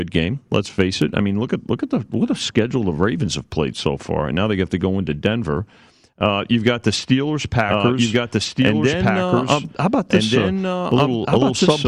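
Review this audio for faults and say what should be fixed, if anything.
From 7.69 s to the end, the speech suddenly gains a second, equally loud copy of itself trailing about a second and a half behind, so two passages overlap and compete. The copy is full-band and dry, with no decay or room colour, and it switches in abruptly rather than fading up. This is a doubled audio track, likely from the same signal being captured again through a slower route, or an edit that left two offset copies stacked on the timeline. To prevent it, route each source to the recording once and check the edit for duplicate, misaligned regions before export.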